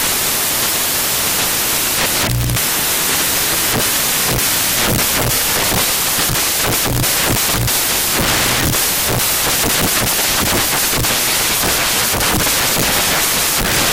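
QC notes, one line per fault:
Throughout: samples built from the wrong bytes. Loud, harsh broadband noise, because low-order bytes landed in the high-order positions of each sample.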